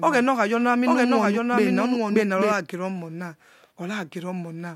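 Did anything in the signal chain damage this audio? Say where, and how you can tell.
Yes. From the start of the clip until 2.52 s, the speech is accompanied by a doubled audio track: a second full-band copy trails the original by about a second, about 5 dB quieter, and it stops abruptly at 2.52 s. It is not an acoustic echo or reverb because the copy has no decay and no room colour. The likely cause is a second, slower capture path or an edit holding two offset copies.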